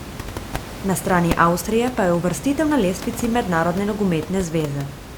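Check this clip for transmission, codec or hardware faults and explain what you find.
No transmission, codec or hardware faults turn up in this speech clip, and the room noise sitting about 12 dB below the speech belongs to the recording itself.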